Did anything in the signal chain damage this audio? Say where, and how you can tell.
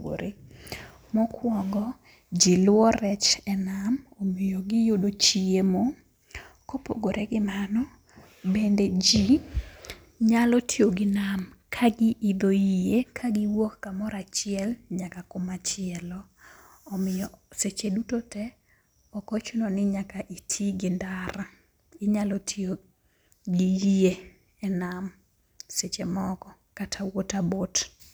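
No, nothing in the chain damaged it.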